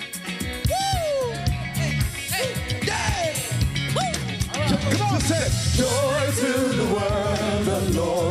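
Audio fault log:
Nothing stood out on listening.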